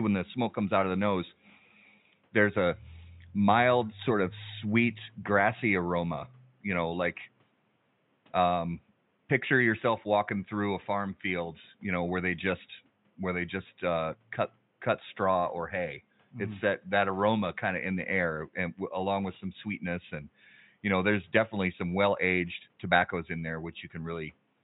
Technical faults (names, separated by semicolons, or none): none